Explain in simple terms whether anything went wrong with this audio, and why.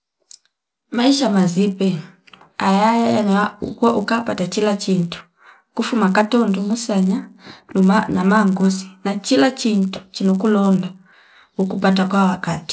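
The resampler restarted on every block, converting each 10 ms chunk separately, so every chunk edge carries a small error, heard as a steady 100 Hz buzz under the speech throughout.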